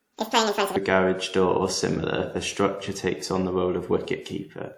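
Right from the start, 0 to 0.76 s, there's a section at the wrong speed. That opening stretch of speech runs at about 1.97 times its proper rate, so it's squeezed and chipmunky, sitting roughly ten semitones too high, before it snaps back to normal speed and pitch just ahead of "a garage door or". Speed and pitch shifting together like that most likely means that bit was played against the wrong clock.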